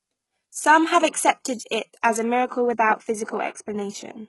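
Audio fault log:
Throughout: HE-AAC compression, likely. Heavy codec damage, with nothing above 11.5 kHz, which fits a very low bitrate near 12 kbps. The treble is rebuilt by copying lower bands upward, so harmonics misalign and sibilants turn gritty or metallic. A plain low-pass would instead leave dull treble, not synthetic treble.
0.33–2.33 s: pre-emphasis left on. The treble sits about 8 dB above 1 kHz at 10 kHz, matching the CD 50/15 µs curve with no de-emphasis applied. It sounds thin, bright and sibilant. Unlike codec treble, it is a smooth, steady tilt that stops at 2.33 s.
1.12–1.14 s and 2.47–2.51 s: pre-echo. Codec noise spreads over the transform block ahead of sharp attacks, giving hiss 28 ms and 34 ms long before each onset and smearing the attacks. Reverb or echo would trail after the sound, never precede it.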